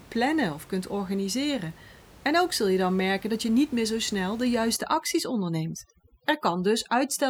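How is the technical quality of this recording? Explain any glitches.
One glitch affects the recording, in its final stretch. From 4.76 s to the end at 7.29 s, overdone noise removal sets in: a noise reduction stage pushed far too hard cuts individual frequency bands whenever they drop near its noise estimate, taking quieter parts of the speech with them. The room noise, about 24 dB below the speech, collapses into near silence dotted with twinkling specks.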